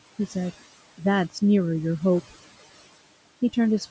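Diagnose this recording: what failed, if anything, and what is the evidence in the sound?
Noise suppressor artifacts throughout, at the call-processing stage. The room noise sinks about 17 dB between phrases and rises back under speech, band by band rather than as a gate's all-or-nothing cut.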